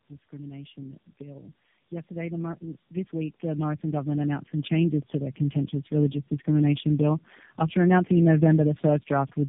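Tandem speech coding runs through the whole clip: the speech sounds like it was decoded and re-encoded by about three low-rate speech coders in a row. Each pass degraded the last, leaving rough, muffled, warbly speech with nothing above 3.8 kHz.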